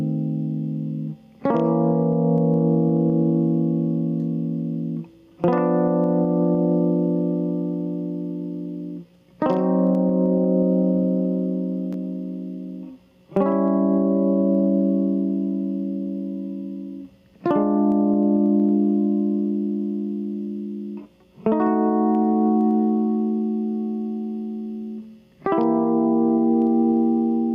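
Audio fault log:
Throughout, gain pumping: the input gain was likely set far too high for the source, so a fast limiter or compressor keeps clamping down each time the music gets loud and then lets go. The level swings by around 10 dB. Loud and soft moments end up squeezed close together in level, and the music sounds flattened and crushed.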